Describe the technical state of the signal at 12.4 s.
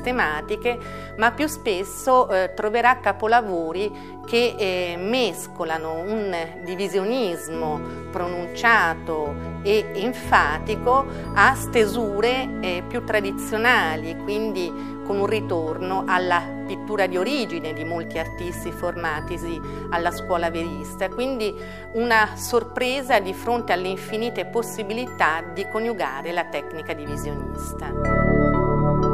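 At 12.4 s the signal is intact, with no dropout, distortion, glitch or other technical fault audible at that moment.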